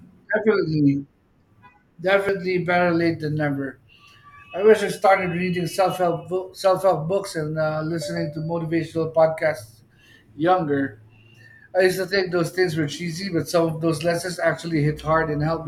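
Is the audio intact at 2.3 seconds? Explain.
No. At 2.29 s the speech is broken by a brief glitch from damaged data in the compressed stream. Corrupted bytes there made the decoder misread the affected frame and lose sync until it found the next valid frame header.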